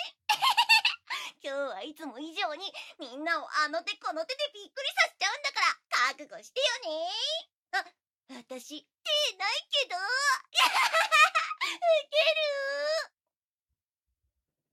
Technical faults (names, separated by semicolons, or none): none